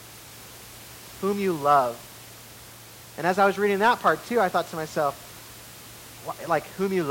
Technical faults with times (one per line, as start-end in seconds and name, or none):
none